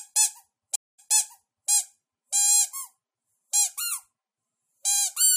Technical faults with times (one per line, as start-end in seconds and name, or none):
0.76-1.70 stream reconnect